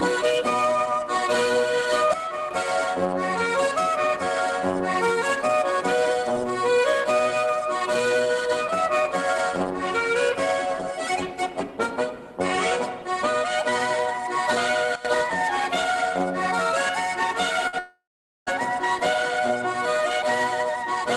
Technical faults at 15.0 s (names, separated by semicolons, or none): sudden gain jump